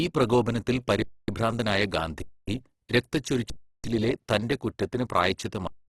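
Throughout the speech the sound is rough and grainy, with nothing above about 12.2 kHz and heavy codec damage. This is most likely Opus compression in its music mode at a low bitrate, near 12 kbps, filling starved bands with noise.

The speech stops dead and goes flat, with little or no click, at 1.02 to 1.28 s (256 ms), 2.22 to 2.48 s (256 ms), 3.50 to 3.84 s (341 ms, before "തന്റെ കുറ്റത്തിന്"), and from 5.67 s to the end (216 ms). These are underruns with a held sample. The output buffer emptied and the converter held its last value, then playback resumed where it had stopped, so each return is soft.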